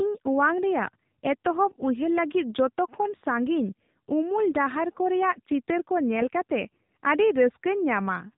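AMR narrowband mobile codec damage runs throughout this speech. The audio was squeezed into an 8 kHz-sampled mobile speech model, so nothing above 4 kHz survives, and the plainly buzzy, synthetic quality fits a low mode of around 7.4 kbps.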